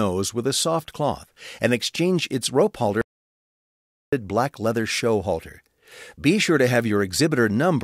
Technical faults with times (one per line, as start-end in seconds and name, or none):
3.01-4.12 audio dropout to silence